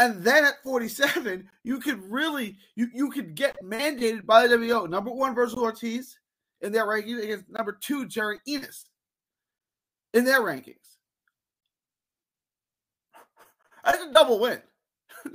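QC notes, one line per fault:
1.51–1.53, 3.53–3.55, 5.55–5.57, 7.57–7.59, 9.59–9.61, 11.61–11.63, 13.63–13.65 s: gap between chunks. A 20 ms hard-edged silence after every 2.0 s block of audio, at a steady 2.02 s spacing. Playback resumes exactly where it stopped, so nothing is missing, unlike a dropout.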